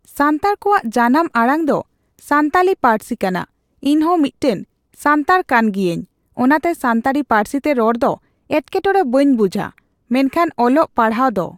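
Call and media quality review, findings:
No audible faults found in the speech on review; nothing to log against any component.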